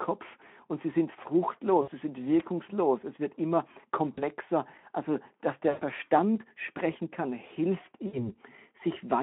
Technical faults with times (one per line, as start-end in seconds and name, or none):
1.81-1.91 VoIP packet loss concealed by the speech codec
4.14-4.23 VoIP packet loss concealed by the speech codec
5.69-5.83 VoIP packet loss concealed by the speech codec
8.07-8.37 VoIP packet loss concealed by the speech codec